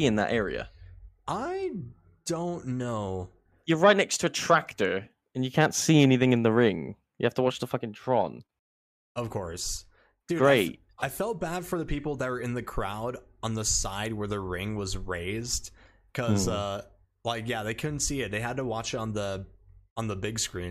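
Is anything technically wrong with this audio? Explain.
No, the signal shows no technical faults that a listener can hear.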